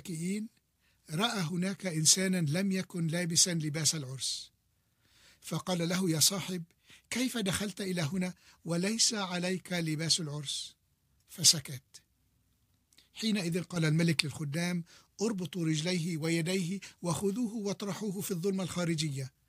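At 13.76 s the digital gain most likely changed from one sample to the next with no ramp, as when a level setting or bit shift is applied instantly. The result is a sudden gain jump of about 6 dB that lasts until 14.2 s. The sound and its background noise rise together in one abrupt step, so the floor lifts with the foreground instead of staying put. Then the level drops back just as abruptly.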